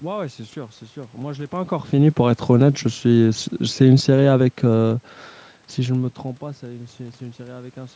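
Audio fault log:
2.48–5.05 s, automatic gain falling: the speech level sinks gradually by about 5 dB, and the room noise beneath it drops by the same amount, because the gain control judged the input too loud or its background noise too strong and lowered its gain step by step.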